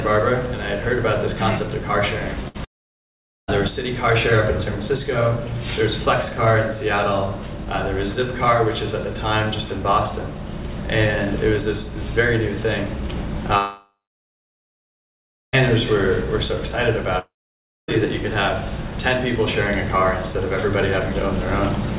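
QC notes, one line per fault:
2.48–2.56 s, burst of packet loss: a short chunk, about 60 ms, goes missing. The receiver stretches the last bit of sound and lets it sag as a brief buzz or hiss, then picks up further along, with that slice simply gone.
2.64–3.50 s, 13.58–15.55 s and 17.19–17.94 s, long network dropout (likely cause): each time the sound holds briefly as a fading buzz or hiss, then goes dead. The silence lasts about 0.8 s, 1.6 s and 0.6 s, and the audio comes back further on with the intervening stretch lost, all band-limited below 4 kHz by the phone-style codec.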